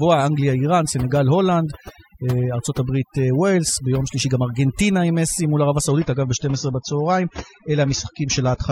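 Right from the start there's overdone noise removal on the whole speech track. The denoiser was clearly set too hard. Any frequency band that drifts near its idea of the noise floor gets pushed way down or switched off, and the quieter bits of the voice get caught with it. So the background sits in near silence with little twinkly specks popping in and out.

Then at 5.89 s there's a sudden shift to the adaptive stream at a lower bitrate, which holds until the end. There's no gap, just an abrupt drop in quality. The top end is gone, with nothing left above 7 kHz, and the codec artefacts get noticeably worse. The change from full treble to that dull, smeared sound fits the player stepping down from an AAC rendition around 96 kbit/s to one around 24 kbit/s after the connection slowed.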